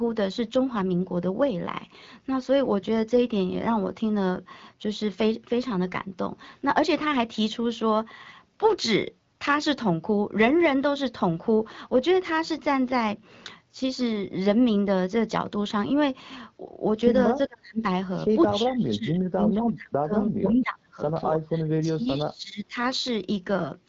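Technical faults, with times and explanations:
17.35–17.83 s, 18.5–21.0 s and 21.47–22.76 s, speech suppressed in double talk: the speech dips sharply, falling by around 40 dB in the first short stretch and around 25 dB across the two longer ones, with about 0.4 s, 2 s and 1 s affected in turn. The likely cause is an echo canceller turning the line down while both ends spoke at once, unable to tell the near talker from loudspeaker echo. The AMR-WB bandwidth, ending near 7.5 kHz, is present throughout.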